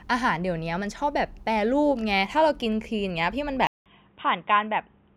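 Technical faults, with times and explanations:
3.67 to 5.16 s, input switched to a poorer device: after a gap of about 0.19 s the sound turns dull and boxy, with nothing above 3.8 kHz, about 5 dB quieter, and carrying a fresh background noise roughly 40 dB below the signal. The likely cause is the recording moving to a different microphone or headset mode. A filter or codec change would only narrow the band, whereas this also brings the gap, a level drop and a different noise floor.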